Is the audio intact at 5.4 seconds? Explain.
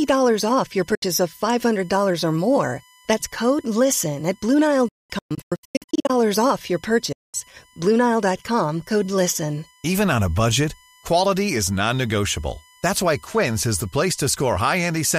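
No. At 5.4 s the audio sits inside a Bluetooth dropout that runs from about 4.88 s to 6.1 s. Across that 1.2 s stretch the speech is broken by repeated silent holes, totalling about 0.81 s of missing sound, the longest gap lasting about 0.21 s. After each hole the speech resumes further on, as though it had kept playing unheard. The likely cause is audio packets failing to reach the headphones in time, so the output fell silent until good packets arrived again.

Also present at 5.4 s, as everywhere in the clip, is USB whine: a steady, fixed-pitch tone at 1 kHz, strongest at its third harmonic, 3 kHz, and sitting about 35 dB below the speech. It fits current drawn by the USB bus in 1 ms frames leaking into the audio through the power or ground path, which turns that frame rate into an audible pitch and its multiples.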